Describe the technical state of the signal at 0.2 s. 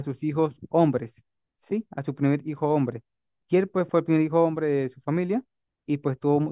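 At 0.2 s the speech signal is intact, with no dropout, clipping, distortion or other fault audible at that moment.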